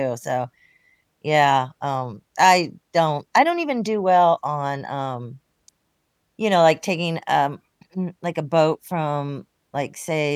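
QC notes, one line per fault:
Nothing to flag in this speech clip. The listening pass turned up no issues to log.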